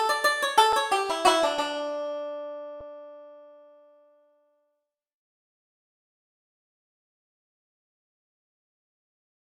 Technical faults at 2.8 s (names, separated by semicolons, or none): underrun with held sample